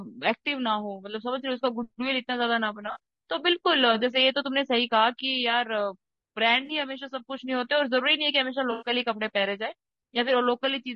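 Throughout the speech, the voice sounds rough and grainy, with noise filling the gaps between harmonics and a thin, synthetic top band. This is likely low-delay AAC compression (AAC-ELD), whose short frames resolve pitch poorly, and the plainly audible damage fits a bitrate around 32 kbps.

AAC frame loss with concealment occurs at 2.91–2.98 s, 6.65–6.71 s and 8.71–8.89 s. The decoder rebuilds missing frames from the last good spectrum. The two brief gaps, each about 40 ms, sound like smeared, phasey patches. The 100 ms gap at 8.71 s is a longer noisy blur.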